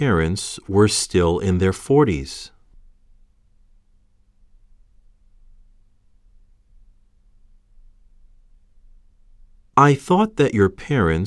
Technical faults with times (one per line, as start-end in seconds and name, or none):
none